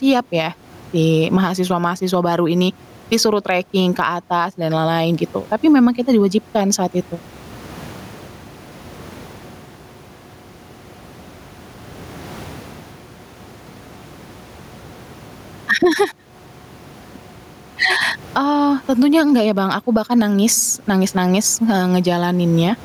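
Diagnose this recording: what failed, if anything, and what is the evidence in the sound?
Gain pumping throughout, likely a fast limiter in call processing fighting excessive input gain: the gain swings roughly 15 dB under speech.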